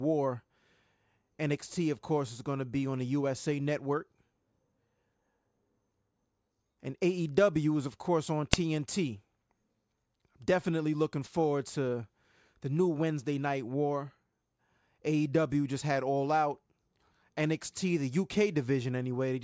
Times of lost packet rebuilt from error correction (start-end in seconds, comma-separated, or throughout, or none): none